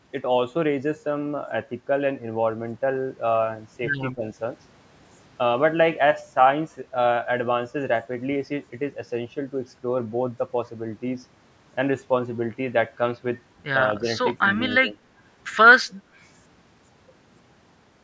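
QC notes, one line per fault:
4.14–4.25 s, 13.94–14.07 s, 14.84–14.98 s: speech suppressed in double talk. The speech briefly dips by around 15, 5 and 10 dB, each dip lasting about a tenth to 0.15 of a second, likely because an echo canceller ducked it during overlapping talk. These are partial dips rather than dropouts to silence.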